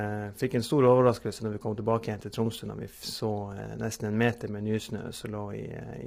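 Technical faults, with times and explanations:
Throughout: low-delay AAC compression. The speech was likely encoded with AAC-ELD, the low-delay AAC used for video calls, at a heavily starved rate that fits roughly 24 kbps. Its very short frames cannot resolve the pitch harmonics finely, and the encoder runs out of bits, so noise fills the gaps between harmonics and the top band is thinned or rebuilt synthetically. The voice comes through rough and grainy, with a dull, artificial upper range.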